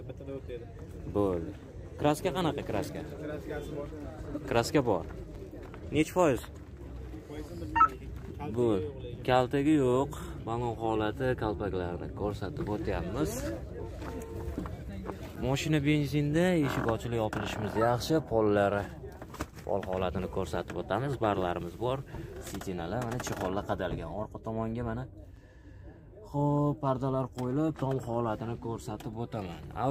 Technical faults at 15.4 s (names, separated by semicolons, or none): gap between chunks